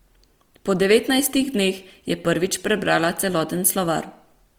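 Opus compression runs throughout this speech clip: the sound is plainly grainy, rough and noisy, with little swirl and few spectral holes and content still reaching 20.3 kHz. This likely comes from Opus's CELT music mode filling starved bands with folded or noise energy, which fits a low bitrate near 24 kbps.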